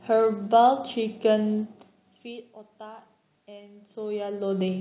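The signal shows no technical fault: the speech carries room noise and level changes from the talker moving around 1.5 s and 3.5 s, and nothing sounds above 4 kHz, which fits a G.711 mu-law call path at 64 kbps.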